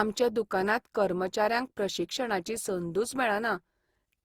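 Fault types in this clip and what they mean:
Generation loss: The speech sounds swirly and hollow, with a smeared, watery texture, and consonant attacks are blurred rather than crisp. This is more damage than a single pass at the rate the sound suggests, around 48 kbit/s Opus, would leave. The likely cause is repeated lossy re-encoding, perhaps about four passes. Each pass quantises on a shifted frame grid, so noise piles up, although content still reaches up to 20.3 kHz.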